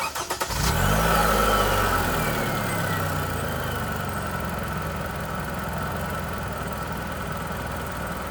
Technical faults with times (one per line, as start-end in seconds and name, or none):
1.38-7.91 clock drift buffer slips